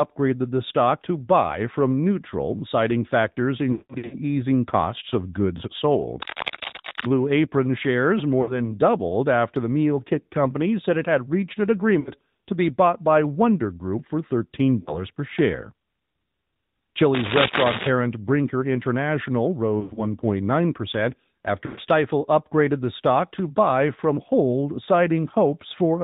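Throughout the speech, AMR narrowband mobile codec compression at 10.2 kbps cuts everything above 4 kHz and gives a plainly audible buzzy, synthetic edge. Unlike plain low-pass filtering, the damage sits in the voice itself: the codec rebuilds it from a vocal-tract model with sparse pulses, so the voice sounds reconstructed rather than merely dull.

The first lost AMR speech frames occur from 3.72 to 4.16 s, with about 300 ms missing across 400 ms and a longest run of 180 ms. There the decoder repeats its last good pitch and spectral settings at falling gain, so the sound smears, warbles and sinks toward silence before recovering roughly.

From 6.14 to 7.06 s comes cable scratch noise, dense and irregular crackle at about the level of the speech, likely from a worn cable or connector being moved. It sits on top of the voice rather than distorting it, which separates it from the codec faults.

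Shorter frame losses of 60 ms follow at 8.42 to 8.55 s, at 12.00 to 12.11 s between "it had reached an" and "to be bought by", and at 14.80 to 14.98 s just before "per share". Each is a brief dip or warble, not a hard click or gap.

A second scratch burst runs from 17.14 to 17.89 s.

More frames drop at 19.80 to 20.01 s, with 100 ms lost across 160 ms in runs up to 60 ms, and at 21.66 to 21.80 s, where 120 ms is lost just before "upgraded the stock to".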